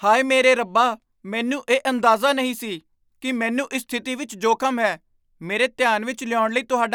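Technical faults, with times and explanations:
No technical faults, with times and explanations, can be given, as none are heard in this speech.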